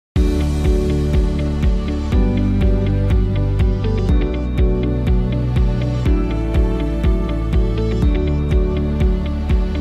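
No technical faults turn up anywhere in the recording.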